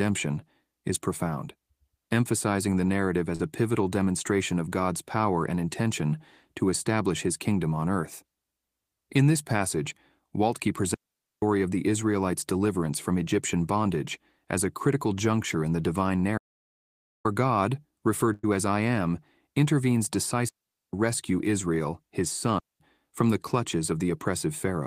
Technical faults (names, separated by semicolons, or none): short concealed packet loss; digital wireless dropout; audio dropout to silence; burst of packet loss